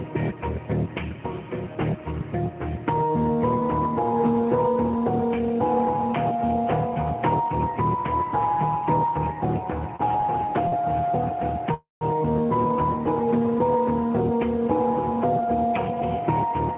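A short stall from a late packet occurs at 9.96 s and again at 10.68 s. Each time a packet was late and the jitter buffer ran dry, so the receiver stretched the last sound by 34 ms and then 40 ms. It resumes from the same point, leaving a held sound with a faint buzz or dip.

A call audio freeze runs from 11.74 to 12.14 s. The sound is drawn out for about 270 ms, decaying into 160 ms of silence before the audio picks up where it stopped, with nothing lost. The likely cause is a run of packets delayed in transit that emptied the jitter buffer.

A jitter buffer speed-up spans 15.39 to 16.73 s. The buffer had built up excess delay, so the receiver trimmed pitch-period-sized slices, around 50 ms in total. Playback runs at 104% speed with unchanged pitch. The band stops at 4 kHz, which fits a 64 kbps G.711 mu-law call path.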